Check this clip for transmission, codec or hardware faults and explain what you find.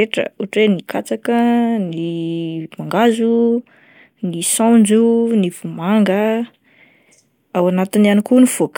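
Nothing stood out on listening to this speech recording.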